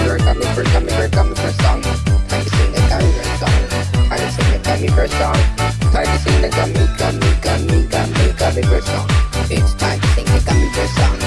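Nothing stood out as a technical problem on listening to this audio.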